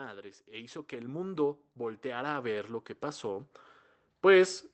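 From 0.28 s to 3.59 s the level climbs steadily by about 12 dB, the signature of automatic gain rising: the gain control judged the input too quiet and turned its gain up step by step over those 3.3 seconds. Because the gain is applied to the whole signal, the speech and the background swell together rather than the voice alone getting louder. Throughout, the call codec's band limit near 8 kHz is audible, consistent with Opus at around 20 kbps.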